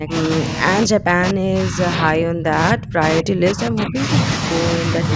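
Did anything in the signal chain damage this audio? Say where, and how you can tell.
Yes, in the call processing stage. The speech keeps ducking from 0.0 to 0.63 s, 0.84 to 3.04 s and 3.2 to 4.08 s, sinking by roughly 30 to 35 dB in places and breaking into pieces, then dipping only slightly from 4.83 to 5.11 s. That pattern likely comes from speech suppressed in double talk: the echo canceller couldn't tell this talker from the far end's echo and pulled both down.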